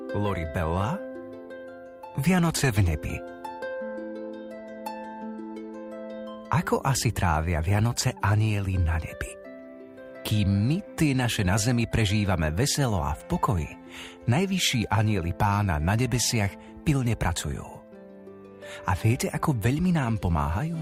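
No technical faults are audible anywhere in this audio.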